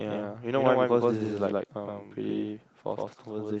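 Speech with a doubled audio track running throughout: a second, full-band copy trails the original by about a tenth of a second at roughly equal level, with no decay or room colour. It is likely a second capture through a slower path, or an edit holding two copies out of step.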